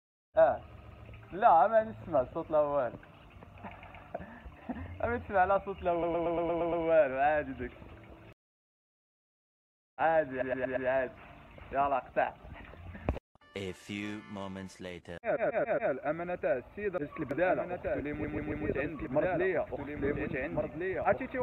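The audio stutters six times as short chunks replay back to back: 0.77–1.05, 3.81–4.04, 6.02–6.83, 10.40–10.87, 15.35–15.91 and 18.23–18.65 s. These are repeated frames, where blocks of 116 or 139 ms of compressed data were decoded again, each stretching the audio by that much per extra play. From 17.3 s to the end a second full-band copy trails the sound by roughly 1.5 s at about 5 dB down, starting abruptly with no room colour. This doubled audio track is likely a second, slower capture path mixed in.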